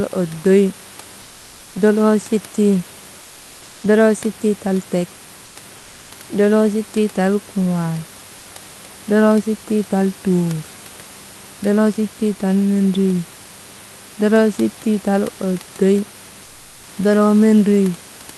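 Speech recorded over a call line, with comfort noise in place of the background in five pauses: 1.21–1.75 s, 3.21–3.83 s (before "doloo sittii tal tek"), 5.45–5.55 s (right after it), 5.77–6.11 s, and 16.43–16.87 s (after "doloo sittii tal oddoy"). Each time the room noise turns into a flat, featureless hiss about 1–2 dB quieter, likely from Opus discontinuous transmission. Unlike a noise gate, the gaps never go silent.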